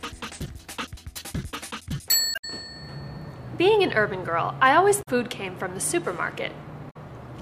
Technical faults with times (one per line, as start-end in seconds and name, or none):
2.31-2.44 damaged data in a compressed stream
4.99-5.08 damaged data in a compressed stream
6.87-6.96 damaged data in a compressed stream